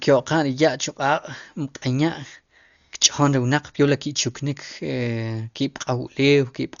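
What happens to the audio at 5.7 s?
At 5.7 s the speech sounds dull and muffled, with a rough, fluttering grain clinging to voiced sounds. Nothing is heard above about 6.9 kHz, and this persists through the whole clip rather than starting there. The likely cause is heavy Dolby Digital compression at a starved bitrate, which fits something near 48 kbps: the encoder trims the upper band and leaves many frequency lines without mantissa bits, so the decoder fills them with dither noise.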